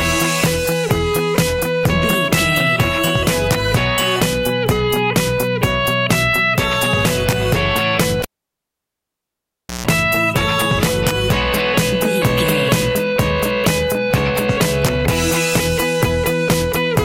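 A cable pulled and plugged in at 8.22 to 9.87 s: a pop, about 1.6 s of near silence, a 156 ms burst of 60 Hz mains buzz, then a reconnection pop.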